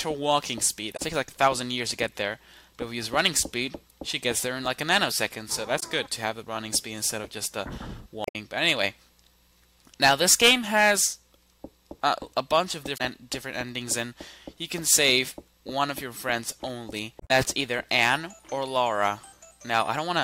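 Damaged data in a compressed stream breaks up this audio five times: at 0.93 to 1.00 s, 5.79 to 5.83 s, 8.24 to 8.35 s, 12.94 to 13.00 s and 17.17 to 17.31 s, each a brief chirp, squawk, click or short hole lasting between about 40 and 140 ms. Bytes in the encoded stream were corrupted at those points, so the decoder misread the affected frames, lost sync and hunted for the next valid frame header before recovering.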